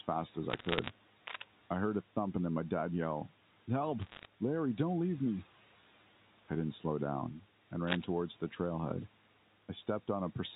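Throughout the speech, noise suppressor artifacts pull the background down by about 12 dB between phrases and let it swell back under them.

From 0.5 to 0.9 s, bit errors on a digital phone line scatter sharp, isolated ticks over speech that is left intact, unlike the denser rustle of a scratch.

From 1.24 to 1.45 s, cable scratch noise brings an uneven burst of rasping nearly as loud as the speech, likely from a worn connector being moved, denser and grittier than the ticks.

From 4.01 to 4.26 s, the bit errors return as a shorter spray of separate clicks, with only a small fraction of bits flipped.

From 7.86 to 8.04 s, the cable scratch noise comes back, now about as loud as the speech, as a brief rough rustle.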